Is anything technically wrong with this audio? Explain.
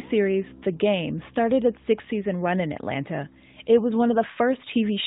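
No, nothing in this audio points to a technical fault.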